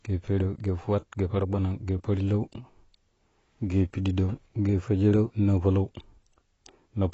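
From start to finish the speech carries AAC compression damage, plainly audible, and most likely from AAC-LC encoding at a low bitrate, consistent with roughly 24 kbps. To save bits the encoder discards everything above 8 kHz and coarsely quantises what remains, so the sound is dull and smeared, with a fizzy, warbling edge on sibilants. A spectrogram shows a flat ceiling at 8 kHz.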